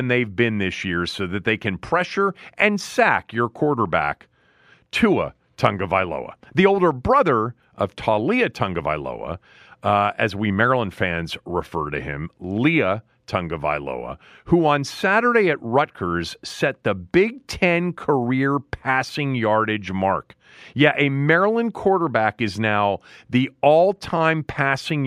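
No technical faults are audible anywhere in the recording.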